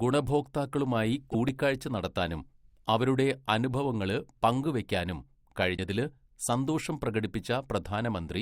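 At 1.27–1.35 s and 5.74–5.79 s, after "അവരുടെ അനുഭവങ്ങള് പങ്ക് വയ്ക്കാനും", damaged data in a compressed stream makes the decoder misread frames and lose sync. The result is a short disruption in the speech.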